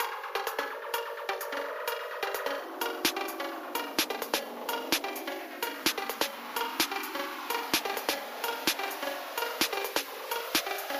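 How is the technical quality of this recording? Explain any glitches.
No glitches or faults are audible.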